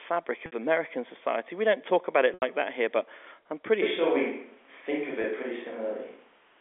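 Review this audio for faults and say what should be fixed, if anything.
Packet loss with pitch repetition occurs at 0.46 to 0.52 s (60 ms), at 2.34 to 2.42 s (80 ms), between "don't talk about it" and "that here but I'm", and at 5.22 s (20 ms). Each time, the receiver loops the last pitch period, so the sound briefly holds on a buzzy tone. On a waveform this appears as identical cycles repeating with a fading envelope. On a spectrogram the harmonics run frozen and flat. The durations fit 20 ms packets. Adding jitter buffering or forward error correction on the link would prevent these dropouts.

A switch to a distant microphone happens abruptly at 3.82 s, right after "here but I'm pretty", and lasts to the end. The sound turns roomy and hollow, with thinner bass and little change in level, while room noise rises to around 30 dB below the signal. On a spectrogram the low end thins, a raised noise floor fills the gaps, and reverberant tails smear the onsets. 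The likely cause is that the close microphone dropped out. Checking the close microphone's connection and battery, and monitoring its feed during recording, would prevent this.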